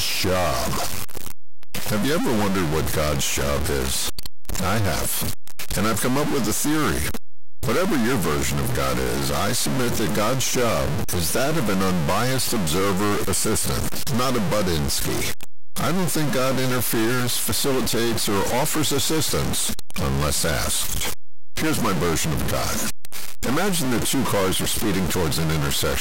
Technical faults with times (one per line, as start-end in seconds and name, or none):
0.00-26.00 stuck bit